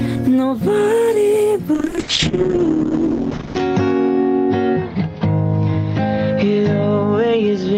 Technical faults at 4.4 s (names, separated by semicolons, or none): call bitrate drop